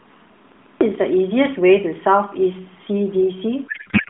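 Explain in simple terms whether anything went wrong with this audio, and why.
Two things went wrong. First, a CD stuck on one turn: a scratch keeps knocking the laser back to the same spot. From 0.52 to 0.81 s, the same 0.14 s of speech plays twice more, each time after a tiny gap, giving a quick, even stutter.

Second, a codec payload misread: the sending and receiving ends disagree on how the phone codec packs its data, so the receiver unpacks each chunk with its pieces in the wrong places. From 3.68 s to the end, the speech turns into garbled, warbling noise that barely follows the voice. Throughout, the mobile phone codec itself trims the sound to a narrow telephone-like band.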